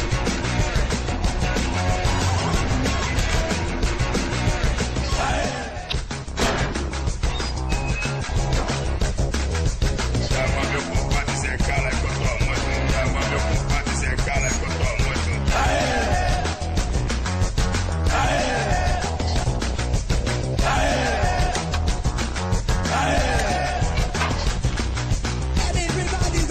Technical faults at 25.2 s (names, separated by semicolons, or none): compressed frames skipped